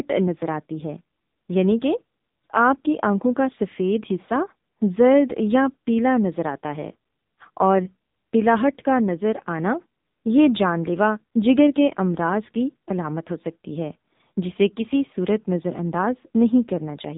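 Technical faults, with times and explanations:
Throughout, AMR narrowband mobile codec: nothing above 3.8 kHz survives, and heavy low-rate coding, consistent with about 6.7 kbps, makes speech buzzy and synthetic.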